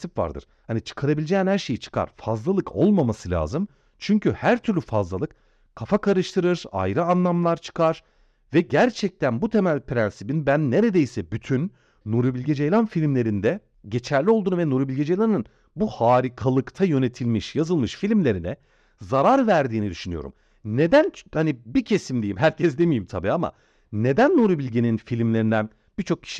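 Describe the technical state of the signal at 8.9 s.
At 8.9 s the signal is intact, with no audible technical fault at that moment.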